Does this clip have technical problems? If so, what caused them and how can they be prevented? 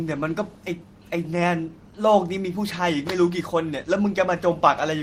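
No, nothing technical goes wrong in this speech recording, so there's no cause to track down and nothing that needs preventing here.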